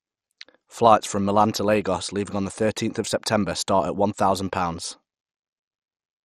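MP2 compression artefacts run through the whole speech clip: the sound is dull, with nothing above 13.2 kHz, and carries heavy gurgling, granular distortion. The likely cause is MPEG Layer II coding starving its sub-bands of bits, switching upper bands off and coarsely quantising the rest, which fits a rate around 56 kbps.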